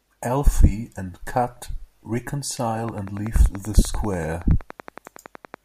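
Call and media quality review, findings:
Train of clicks, 2.89 to 5.55 s. Regular ticking at 10.5 per second, about thirty pulses of near-identical shape, peaks about 5 dB above the speech. Likely interference or a faulty connection or power supply injecting periodic pulses.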